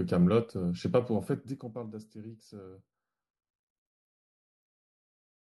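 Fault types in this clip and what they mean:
Zipper noise: an unsmoothed gain drop of about 15 dB, stepped in 1 dB increments roughly twenty times a second, shows as evenly spaced vertical click lines on a spectrogram and a staircase envelope in the waveform.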